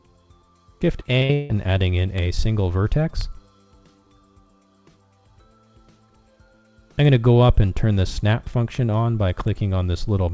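From 1.0 to 1.51 s, repeated packet loss struck the call stream: four holes opened in quick succession, the longest lasting 162 ms, and each was patched by stretching the sound that came just before it. Nearly half of that half-second is concealment rather than real audio, and about 240 ms of the original is simply gone. The result is choppy and robotic, with a looping texture where the repeated fragments stand in for missing material.

Later, single bit errors corrupted isolated sample values at 2.18, 3.21, 7.05, 8.75 and 9.48 s. Each time the waveform jumped by a power of two and snapped straight back. The one at 3.21 s hit two adjacent samples instead of one. Each spike is heard as a sharp, bright tick that has nothing to do with the surrounding sound. All of this sits inside a call path with nothing above 8 kHz, consistent with G.722 at 64 kbps.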